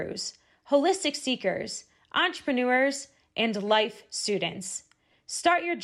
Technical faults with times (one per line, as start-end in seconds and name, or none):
5.12 lost LE Audio frames